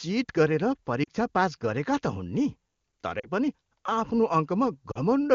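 Speech coded in wideband AMR, clean enough to suggest a high bitrate near 23.85 kbit/s, breaks up three times with lost AMR speech frames: at 1.04 to 1.09 s, 3.19 to 3.28 s and 4.91 to 4.98 s. Each gap of about 40 ms fits two lost frames. Unlike a hard dropout, the sound doesn't cut to silence or click. The decoder stretches the last good frame at falling level, fading to near silence within the two frames, then returns weak or rough for a moment.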